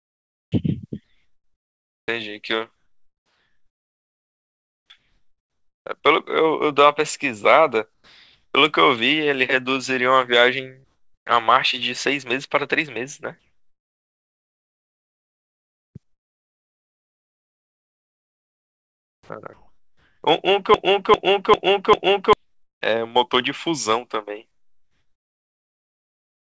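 Speech in which the pauses between phrases lose their real background and turn into a flat, featureless hiss at 0–0.52 s, 1.04–2.08 s, 2.76–5.86 s, 7.94–8.54 s, 16.03–20.23 s and 24.51–26.44 s. In several of these the hiss is quieter than the background it replaces, by about 32 dB at the start and about 10, 5 and 3 dB elsewhere. This is comfort noise in place of the background, likely from discontinuous transmission: the sender went silent and the receiver filled the gaps with synthetic noise. From 20.74 to 22.33 s a fragment of about 0.4 s repeats back to back four times, and the audio that belonged there is lost. This broken-record loop likely comes from a stalled stream that kept replaying its last buffered piece. Throughout, nothing reaches above 8 kHz, which fits a G.722 call codec at 64 kbps.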